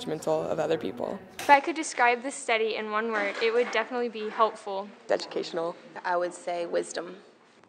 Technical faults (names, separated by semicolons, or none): input switched to a poorer device